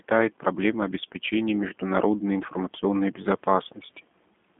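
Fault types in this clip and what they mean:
G.729 codec: plainly rough, slightly synthetic speech held to 200 Hz to 3.5 kHz, nothing above 3.7 kHz, which fits 8 kbit/s model-based speech coding.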